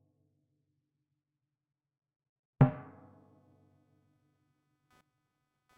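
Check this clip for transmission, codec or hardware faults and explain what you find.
There's one hardware fault here: computer activity noise. From 2.61 s to the end, a faint buzzing chirp around 300 Hz, roughly 40 dB under the sound, rides along. Processor or graphics load is disturbing the audio circuit's shared ground, so the buzz follows the computer's activity, not the sound.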